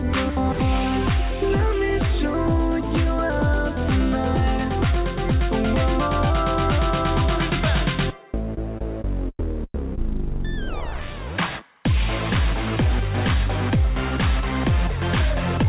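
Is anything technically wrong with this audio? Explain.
No, nothing stood out as a technical problem on listening; the sound simply carries the narrow, telephone-like bandwidth of a call path, with nothing above about 4 kHz.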